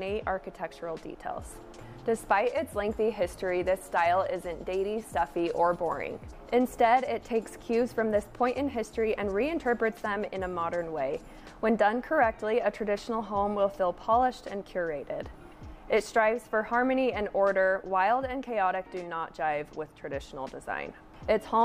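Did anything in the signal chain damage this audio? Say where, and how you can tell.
No, nothing in the chain damaged it.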